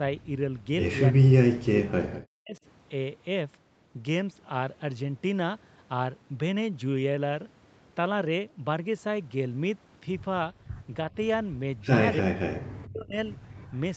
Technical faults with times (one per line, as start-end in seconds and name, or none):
1.11-1.88 speech suppressed in double talk
2.40-2.62 speech suppressed in double talk
12.20-12.33 speech suppressed in double talk
12.74-13.17 speech suppressed in double talk
13.56-13.78 echo leak